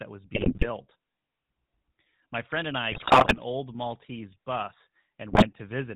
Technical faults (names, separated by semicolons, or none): GSM full-rate codec; GSM bit errors